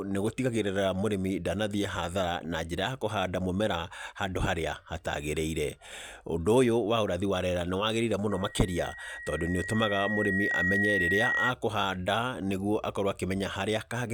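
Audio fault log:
8.30–11.53 s, loudspeaker feedback squeal: a single 1.9 kHz tone swells over roughly two seconds to about 5 dB above the speech. The microphone is re-amplifying its own loudspeaker. This self-reinforcing rise sets it apart from a steady interfering tone or hum.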